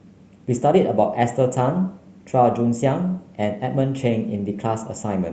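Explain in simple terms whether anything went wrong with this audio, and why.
Nothing went wrong here: the speech simply came through an ordinary internet call connection, so any dulling of the very highest sounds is just what such calls normally do, not a fault.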